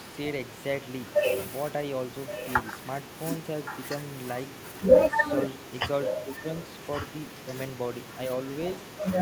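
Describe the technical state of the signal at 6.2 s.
At 6.2 s a delayed second copy of the speech runs under the main talker from 6.05 to 6.42 s, trailing by about 1.12 s and only a little quieter than the original. This echo leak likely comes from a far-end loudspeaker whose echo canceller let part of its microphone pickup return down the line.

Overlapping that, from 6.21 to 6.47 s, the talker's level sags deeply and unevenly for roughly a third of a second. This is speech suppressed in double talk, likely an echo canceller that, with both sides sounding at once, turned down the genuine speech along with the echo.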